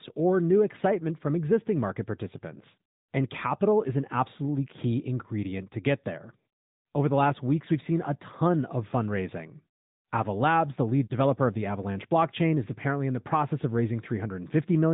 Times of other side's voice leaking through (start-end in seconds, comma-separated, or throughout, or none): none